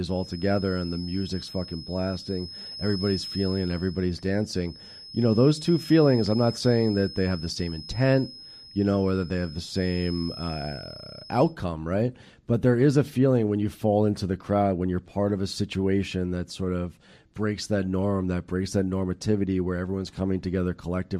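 A thin, steady whistle near 5.2 kHz sits about 15 dB under the speech from the start to 11.58 s, swelling and fading slowly in level. This feedback whistle likely comes from a loudspeaker-to-microphone loop held just at the edge of feedback.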